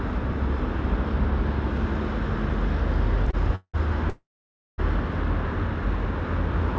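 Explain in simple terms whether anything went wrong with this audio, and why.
Around 3.31 to 3.50 s there's a short stall from a late packet: one chunk of audio showed up a little late, so the receiver stretched the last bit of sound for about 20 ms until it arrived. Nothing is lost; that moment just hangs slightly too long.

Right after, there are two call audio freezes, most likely from packets getting held up on the network so the receiver's buffer ran dry. From 3.55 to 3.76 s the sound carries on as a fading buzz and then goes quiet for about 60 ms. From 4.10 to 4.80 s it's longer: a brief fade, then roughly half a second of silence. In both cases the audio picks up exactly where it stopped, so a gap was inserted rather than anything cut out.

The call path itself, a G.722 call codec, passes nothing above 8 kHz, so the top end sounds a bit dull.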